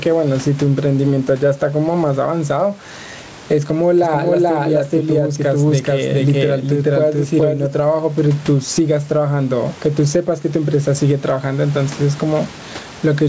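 Speech, carried over a call path whose G.722 coding limits the band to 8 kHz, shows gain pumping for its full length. The gain swings by around 15 dB. Peaks and quiet passages sit unnaturally close together, so the speech sounds squashed. The likely cause is input gain set far too high, with a fast limiter or compressor clamping down on every loud syllable and releasing in the gaps. A doubled audio track appears from 4.03 s to 7.67 s. A second full-band copy of the speech runs roughly 0.4 s behind the original at about the same level. It carries no reverberant tail or room colouring, and it cuts in and out abruptly at those two points. The likely cause is the signal being captured a second time through a slower path, or an edit that left two misaligned copies overlapping.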